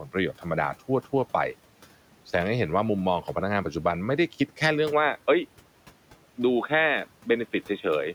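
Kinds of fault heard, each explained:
Input switched to a poorer device: the system likely moved to a narrower input at 4.92 s, leaving the speech dull and boxy.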